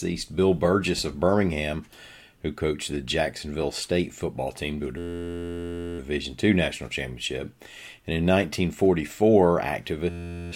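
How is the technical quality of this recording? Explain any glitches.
The recording has two glitches, both the same kind: a system hang loop. The first runs from 4.98 to 5.99 s, right after "football team to a," and the second from 10.10 to 10.52 s. Each time, the system stalls while the audio hardware keeps replaying the same 11.61 ms slice, which fits a 512-sample buffer. Looping that fast, it comes out as a steady 86.1 Hz buzz instead of a stutter.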